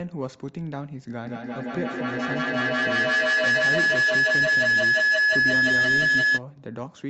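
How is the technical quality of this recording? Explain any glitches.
Quality is seriously compromised by feedback howl. From 1.26 to 6.44 s, a loop between microphone and loudspeaker regains level each pass, with a loop delay of about 150 ms, building a tone near 1.5 kHz that peaks about 10 dB above the speech. On a spectrogram it shows as a bright horizontal line, and the waveform swells into a dense envelope.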